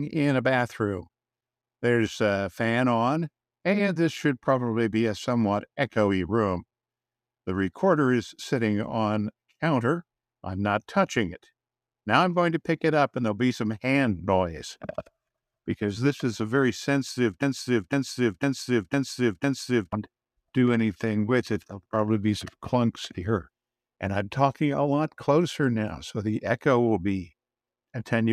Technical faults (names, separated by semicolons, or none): broken-record loop